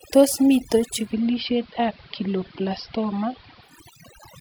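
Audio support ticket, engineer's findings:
Overdone noise removal, whole clip. Denoiser set too aggressive; bands near the noise estimate pulled far down or gated off, taking low-level speech with them. Background drops, breaking into twinkling specks.

Digital radio blending to analogue, 0.95 s to 3.80 s. Hybrid receiver lost digital, cross-faded to the AM simulcast over about 194 ms each way. Level drops about 2 dB; hiss rises, roughly 30 dB under the signal.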